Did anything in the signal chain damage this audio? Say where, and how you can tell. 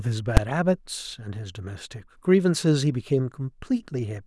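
Yes. There is one loud bang in the speech at 0.37 s. It is a case of invalid numbers at full scale. The fault sits at the float-to-fixed sample-format conversion after processing. A calculation produced infinite or invalid values, and the conversion pinned them to the largest positive or negative code. The output sat at full scale for about 5.3 ms, which fits a 128-sample block. A block that short cannot be heard as a gap. Its sudden start and stop fuse into a single sharp crack.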